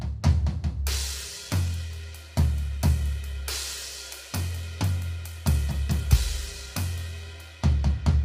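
From the very start and right through the music, there's a rough, grainy texture, with noise filling the gaps between harmonics and a top end that sounds thin and a bit synthetic. That heavy damage is most likely low-delay AAC compression, the AAC-ELD kind used on calls. Its short frames can't separate closely spaced pitches well, and the damage here points to a starved bitrate somewhere around 24 kbps.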